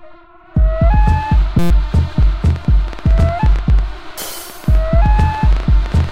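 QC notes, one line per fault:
1.59–1.71 s, system hang loop: a 5.8 ms slice repeats 20 times, giving a steady buzz at 172 Hz. This fits a stalled 256-sample ring buffer replaying itself. On the spectrogram it appears as horizontal harmonic stripes at multiples of 172 Hz, and the waveform shows an identical repeating cycle.
2.23–6.12 s, train of clicks: about 9.3 unevenly spaced pops per second tick over the sound until the end, peaking about 5 dB above it. The likely cause is electrical interference or a faulty connection. The spectrogram shows irregular thin vertical broadband lines, and the waveform shows matching sharp spikes.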